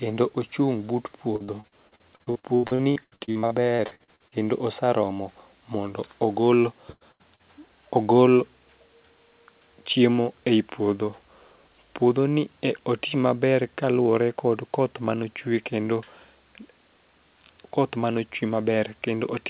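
Repeated packet loss, giving a robotic sound, runs from 1.36 to 4.35 s, ending just before "osaromo mondo ogol". Packets went missing or arrived late about two dozen times in three seconds, the longest hole about 81 ms. Each one was patched by stretching the previous sound, so over a third of the stretch is synthetic fill. The audio turns choppy and metallic, with pieces dropping out. The G.711 call path also caps everything at 4 kHz.

Two bursts of packet loss follow after "osaromo mondo ogol", at 6.92 to 7.04 s and 7.12 to 7.22 s. Each lost about 80 ms of audio in a row. The receiver carried the last sound forward and faded it, so each gap becomes a brief held buzz or a thinning hiss. The audio then resumes further along, with the lost portion simply gone rather than delayed.

Short concealed packet loss occurs at 7.35 to 7.42 s, where about 40 ms failed to reach the decoder in time. 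The receiver bridged the hole by extending the preceding sound, as continued pitch for voiced material or as shaped noise otherwise, and then cross-faded back into the real signal. It registers as a quick smear or wobble right after the two bursts, and a brief consonant there can disappear.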